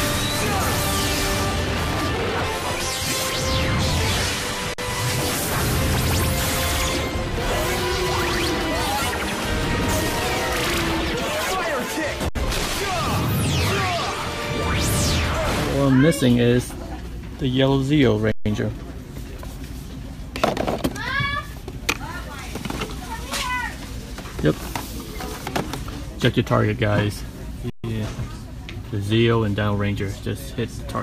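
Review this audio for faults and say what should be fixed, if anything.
Underrun with held sample at 4.74–4.78, 12.29–12.35, 18.32–18.46 and 27.70–27.84 s: the output held its last value, flatlining for 46–139 ms before resuming where it stopped. Give the playback buffer more headroom than the 2048 samples the first gap suggests.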